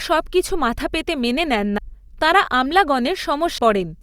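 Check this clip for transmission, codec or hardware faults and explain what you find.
There are two skips, at 1.78 s just after "মাথা পেতে মেনে নেন" and at 3.58 s. This is audio missing between chunks: about a fifth of a second vanishes, likely lost between 2 s processing blocks. The two sides butt together with no silence, unlike a dropout.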